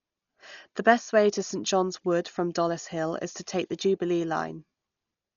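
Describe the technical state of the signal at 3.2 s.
At 3.2 s the speech carries the same damage present across the whole clip, most likely from Dolby Digital compression at a starved data rate, something near 40 kbps. Nothing remains above 7 kHz, so the sound is dull and muffled. Many frequency lines within the kept band received no real detail and were filled with decoder noise, leaving a rough, fluttering haze around tonal parts of the speech. The damage is heavy here.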